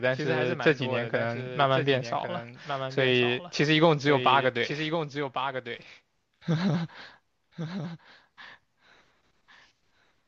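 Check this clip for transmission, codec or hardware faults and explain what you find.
One fault runs through the whole clip. A doubled audio track: the speech repeats about a second later, roughly 10 dB quieter, dry and full-band. A second capture path likely mixed in a delayed copy.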